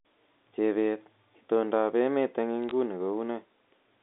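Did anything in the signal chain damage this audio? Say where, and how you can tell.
Yes. Bit errors on a digital phone line crackle briefly from 2.64 to 2.71 s over the 250 Hz to 3.7 kHz G.711 band. Flipped high-order or sign bits jump single samples, seen as isolated waveform spikes and thin full-height spectrogram streaks, a low error rate around a tenth of a percent.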